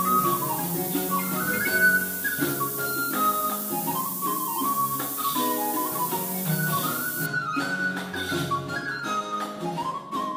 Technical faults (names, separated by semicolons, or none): low bit depth with noise shaping